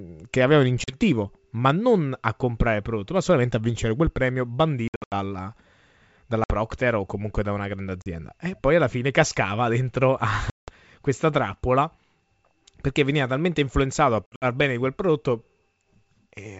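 Speech over a G.722 wideband telephone path shows packet loss on an ADPCM call six times: 0.84 to 0.96 s (40 ms missing), 4.88 to 5.13 s (200 ms in gaps, longest 80 ms), 6.44 to 6.53 s (60 ms), 8.02 to 8.11 s (40 ms), 10.50 to 10.72 s (180 ms) and 14.27 to 14.45 s (120 ms in gaps, longest 60 ms). Lost packets were filled with silence. The waveform shows square-edged dropouts to silence, and the spectrogram shows blank vertical strips. After each gap, the decoder's predictor and step size no longer match the sender's. The speech resumes sounding briefly distorted before settling within some tens of milliseconds.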